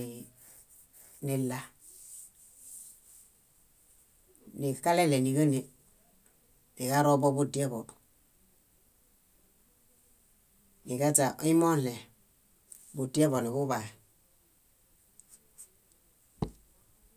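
No faults detected anywhere in the speech; nothing to flag.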